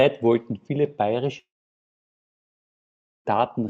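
Just after "wollten viele", at 1.39 s, the speech stops and does not return until 3.28 s. For a moment the last sound carries on as a fading buzz. Within a few tenths of a second only near-silence remains, for about 1.79 s. About 1.86 s of speech is simply gone. This is most likely a long network dropout, with the receiver concealing briefly before giving up. Around it, the sound is capped near 8 kHz by the call codec.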